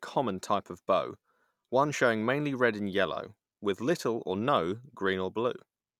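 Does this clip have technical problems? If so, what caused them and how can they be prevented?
No, the signal stays continuous and stable throughout, with no technical faults to trace or prevent.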